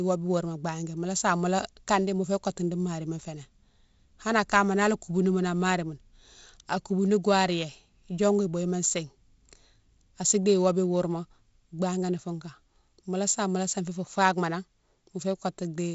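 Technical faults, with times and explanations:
Nothing stood out on listening to this speech, which carries the light upper-band hiss and the ceiling of about 7.7 kHz of G.722 wideband telephone coding at 48 kbit/s.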